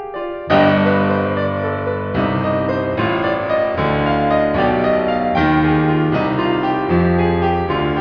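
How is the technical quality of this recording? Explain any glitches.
The music carries no audible technical faults, and the signal stays intact and steady throughout.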